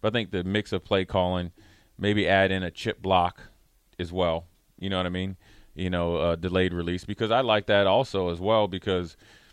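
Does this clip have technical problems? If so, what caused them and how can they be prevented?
No, nothing stood out as a technical problem on listening to this speech clip, so there is nothing here that needs preventing.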